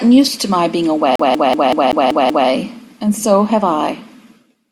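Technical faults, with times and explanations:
1.16 to 2.49 s, CD stuck on one turn. The speech catches on one short piece of audio, 0.19 s long, and plays it again seven times. Each repeat is cut off by a brief mute before the same fragment returns. A scratch keeps sending the laser back one track at the same point on every turn of the disc. That makes the rapid, perfectly even stutter of a skipping CD before normal playback resumes.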